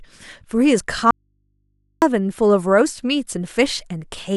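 An audio dropout to a faint residue cuts this speech clip from 1.11 to 2.02 s, losing about 0.91 s abruptly, with only mains hum left roughly 50 dB down. The likely cause is a broken feed upstream while the downstream input stayed live and open.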